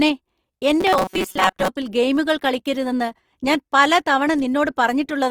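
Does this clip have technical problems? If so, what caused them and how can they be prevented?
Yes. Throughout the speech there is a grainy, rough texture with noisy high frequencies, but no swirling holes in the spectrum. This is likely Opus compression in its music (CELT) mode at a low bitrate, around 24 kbps, which fits what is heard. Each band keeps its overall energy, but the fine detail is replaced by folded or noise-filled content, and that substitution produces the grit. To prevent it, encode at a higher Opus bitrate or use the speech-optimised mode for voice material.

From 0.81 to 1.68 s, just before "ഗെയിമുകൾ കളിക്കരുതെന്ന് ഞാൻ പല", the voice turns into a rigid metallic buzz at about 188 Hz, which is likely robotic sound from repeated short buffers. Audio arrived too slowly, so the playback path looped the most recent fragment while about half of the real signal was skipped. 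A buzz at that pitch fits a fragment of roughly 5.3 ms repeating. To prevent it, enlarge the playback or jitter buffer and make sure audio is delivered steadily.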